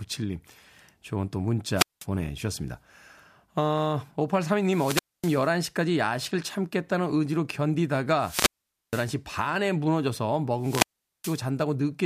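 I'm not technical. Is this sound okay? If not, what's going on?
No. The speech cuts out four times, at 1.75, 4.60, 8.18 and 10.59 seconds. This is a wireless microphone squelch dropout. The radio signal weakens, hiss rises, then the receiver mutes for about 0.2 to 0.5 seconds before the speech returns.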